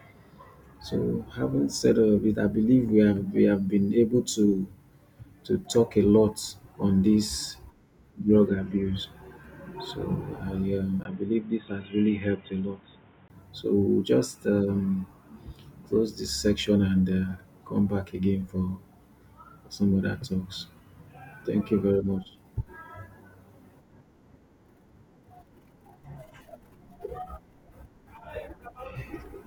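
Input switched to a poorer device, likely, from 11.03 to 13.3 s of this speech recording. After a 20 ms gap at 11.03 s, nothing passes above 3.8 kHz, so the sound turns dull and boxy. It drops by about 5 dB, over new background noise roughly 30 dB below it.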